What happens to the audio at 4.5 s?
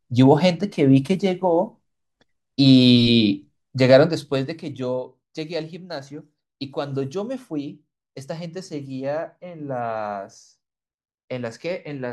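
Nothing goes wrong at 4.5 s: the speech carries on intact, with no dropout, click or jump in level at that point.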